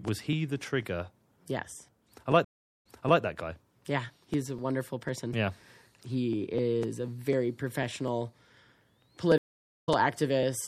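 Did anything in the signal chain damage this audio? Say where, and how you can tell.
Yes. Codec stage: throughout the clip the treble sounds watery and swirly, with smeared attacks, damage that points to likely MP3 compression at a low bitrate around 64 kbps.

Driver or buffer stage: periodic USB or driver dropouts run from 0.08 to 10.43 s. About forty ticks fall every 0.249 s, each where roughly a millisecond of audio was skipped.

Network stage: a stream reconnect at 2.45 to 3.21 s brings 403 ms of silence, then the audio resumes 366 ms earlier. A second reconnect at 9.38 to 9.89 s leaves 495 ms of silence, and the audio resumes roughly 150 ms later.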